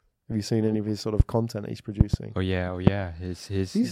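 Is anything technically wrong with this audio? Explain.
Yes. Loud pops break through the speech at 1.20 to 1.22 s, 2.01 to 2.16 s (a double pop) and 2.87 to 2.90 s, each roughly 25 dB above the speech, which carries on underneath. A sudden voltage step, likely from a connector, switch, static discharge or driver glitch, enters the signal path and is shaped by the circuits after it into a sharp thump. On a waveform each shows as a tall spike; on a spectrogram, as a thin vertical stripe spanning all frequencies.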